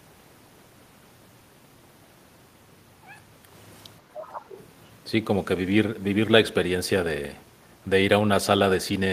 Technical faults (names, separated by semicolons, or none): other side's voice leaking through